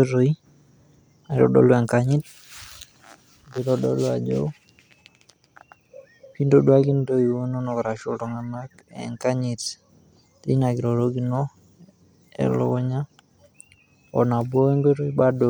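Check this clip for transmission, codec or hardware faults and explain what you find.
No faults found; nothing in the speech warrants a flag.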